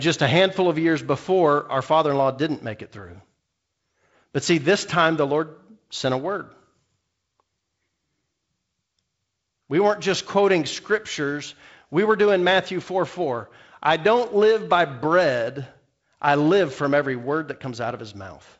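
Nothing in this speech recording stands out as a technical fault. It carries G.722 wideband telephone coding, with nothing above about 7.7 kHz, a faint hiss in the upper band and slightly grainier lower-band detail that fits the codec's 48 kbit/s mode.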